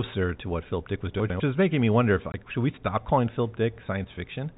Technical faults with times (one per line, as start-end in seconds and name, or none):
1.20-1.40 chunks out of order
2.32-2.34 packet loss filled with silence